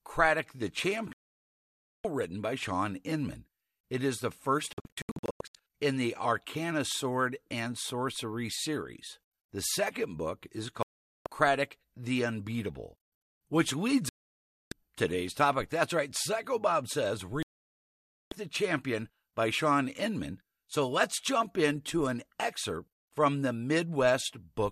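Five digital broadcast dropouts, each where the receiver lost good frames and muted until clean ones returned: 1.13 s (just before "written by"), 4.73 s after "is the first" as a scatter of short holes over about 0.8 s, 10.83 s after "second book is", 14.09 s and 17.43 s. Each gap runs 0.4 to 0.9 s, and whatever was sent then is simply gone.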